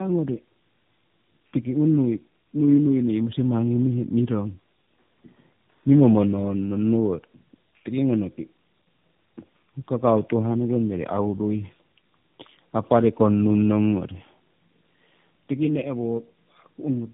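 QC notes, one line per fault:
Throughout: tandem speech coding. Two speech codecs in series, likely G.729A then AMR-NB via G.711, compound their damage: rough, muffled, warbly; the spectrogram is empty above 3.8 kHz.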